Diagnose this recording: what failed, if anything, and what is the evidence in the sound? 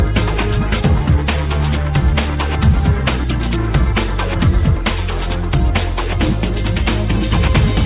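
Nothing failed: no stage in the chain, from wiring and conversion through buffering, transport and playback, leaves an audible defect anywhere in the recording.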